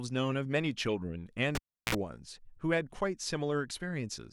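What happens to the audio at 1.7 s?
Cable pulled and plugged in, 1.55–1.95 s: a pop as the lead disconnects, near silence, brief 60 Hz buzz from the touching tip, another pop.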